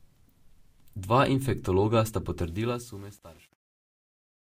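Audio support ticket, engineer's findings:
Truncation distortion on a fade, 2.40 to 4.45 s, starting after "infektologa sta". Gritty, stepped decay. Worst from 2.58 s to end. Likely cause: an undithered gain stage, consistent with 8-bit resolution. Low levels collapse into square steps.

Fix: add dither, or run the fade at higher word length.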